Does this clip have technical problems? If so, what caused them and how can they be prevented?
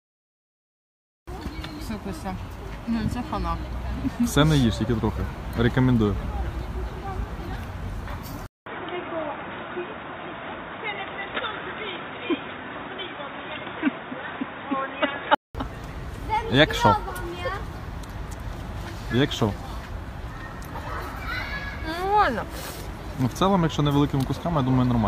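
Yes. The input likely switched to a poorer device from 8.46 to 15.55 s, cutting everything above 3.8 kHz after a 200 ms silence and adding a faint new noise floor. Lock recording to one fixed input device and turn off automatic device switching.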